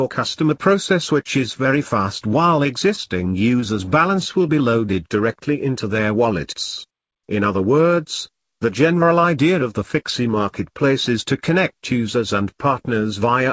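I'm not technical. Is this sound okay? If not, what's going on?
No, not entirely. Two short problems come right after each other.

From 2.96 to 4.36 s there are scattered short gaps. About seven tiny bits of sound went missing on the way. Each was very short, the longest around 15 ms. The receiving end covered each hole by stretching the sound just before it. So the audio stays clear, but you may catch brief ticks, small smears or little hiccups in that stretch.

From 4.42 to 5.18 s comes a jitter buffer slow-down. The receiver's small waiting store of audio was running low, or it had just decided to keep a bigger one. To refill it, it repeated tiny slices of sound again and again. That added 57 ms, so this part plays at 94% speed. The pitch stays the same, but sounds get drawn out, sometimes with a slight wobble.

This came over a call line that cuts everything above 8 kHz, so the top end sounds a little dull.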